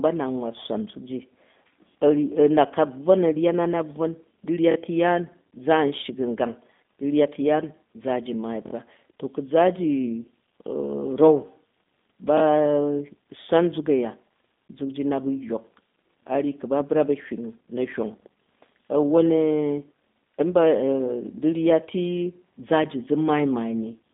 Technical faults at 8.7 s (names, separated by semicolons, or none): G.729 codec; repeated buffer